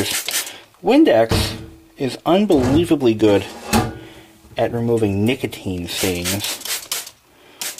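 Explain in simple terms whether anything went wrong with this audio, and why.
Nothing went wrong here: no audible faults anywhere in the recording, so there is nothing to flag or explain.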